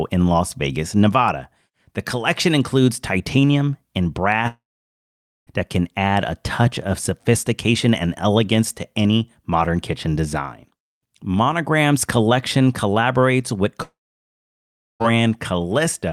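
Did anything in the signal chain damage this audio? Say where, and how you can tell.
Yes. A long network dropout at 4.47–5.49 s (after "collection includes titanium and", resuming at "that can add a") and 13.83–15.12 s (after "collection collaborates with"): a brief fading fill, then silence, with about 1 s and 1.2 s of audio lost, likely from packets never arriving.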